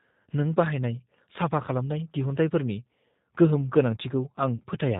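Throughout, the speech carries plainly audible G.729 codec damage: a rough, slightly synthetic texture typical of a low-rate coder, which fits an 8 kbit/s G.729A stream. On a spectrogram, energy stops abruptly at 4 kHz, with nothing above.

From 4.56 to 4.63 s, VoIP packet loss concealed by the speech codec stretches the sound out and lets it fade while the decoder repeats its last pitch and filter. The 40 ms gap fits two lost packets. The waveform shows a decaying patch.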